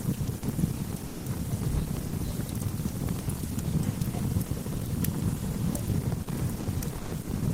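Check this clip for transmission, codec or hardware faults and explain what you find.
The clip of everyday sounds has two related faults. Both most likely come from the sender's voice activity detection in Opus discontinuous transmission (DTX).

Sound chopped by the voice detector occurs from 0.24 to 0.42 s and from 6.60 to 7.27 s. In the first stretch about 60 ms is replaced, and in the second about 270 ms. The likely cause is the detector switching transmission on and off repeatedly, so fragments of the sound are swapped for comfort noise. The result is choppy. What sets this apart from a simple dropout is the repeated toggling within one stretch rather than a single clean gap.

Sound dropped by the voice detector occurs from 1.07 to 1.25 s (180 ms lost), from 2.07 to 2.12 s (50 ms), at 2.99, 3.99 and 5.54 s (about 10 ms each), and from 6.23 to 6.27 s (40 ms). Each time, quiet material was judged to be background, sending stopped, and steady comfort noise filled the gap until sending resumed. 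Unlike packet loss concealment, the gap holds smooth noise instead of repeated or smeared fragments of the sound.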